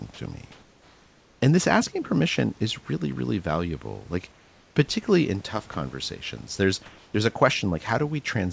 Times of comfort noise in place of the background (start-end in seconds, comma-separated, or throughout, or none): 0.52-1.42, 4.32-4.76